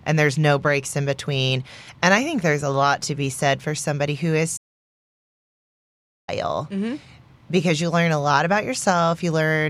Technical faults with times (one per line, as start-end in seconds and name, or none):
4.56-6.29 playback stall